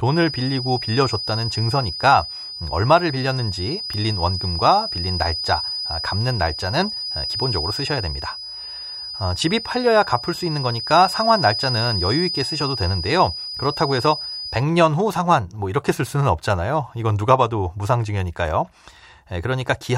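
A speech recording with a feedback whistle from the start to 14.66 s: a thin, steady 5 kHz tone sitting around 10 dB below the speech and swelling and fading slowly in level. The likely cause is a loudspeaker-to-microphone loop held just at the edge of feedback.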